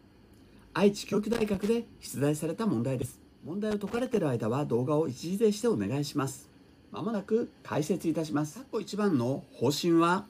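At 1.12 s, compressed frames are skipped. Whole frames never reach playback, so the sound jumps ahead by about 70 ms. On a spectrogram the join shows as a vertical seam where patterns stop lining up.

From 1.33 to 1.69 s, loose connector crackle: an intermittent contact chops the signal into irregular scratching. The waveform shows ragged gaps and sharp spikes, and the spectrogram shows scattered broadband streaks.

At 3.02 s another frame skip drops about 100 ms.

From 3.71 to 4.17 s the crackle returns.

A final skip at 7.13 s loses about 20 ms.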